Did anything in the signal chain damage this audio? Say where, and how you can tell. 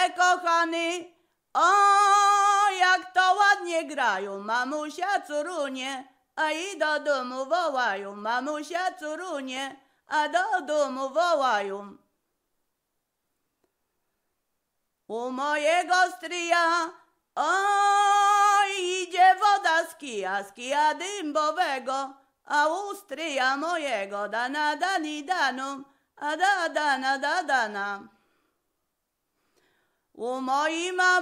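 No, nothing along the chain, from capture through playback, left an audible mark on this audio.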